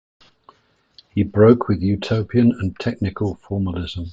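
No technical faults can be heard anywhere in the recording.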